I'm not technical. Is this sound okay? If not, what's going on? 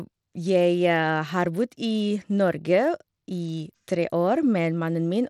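No. Bluetooth SBC compression throughout: the treble flickers and turns gritty, likely because the wireless link gave the highest frequencies too little data.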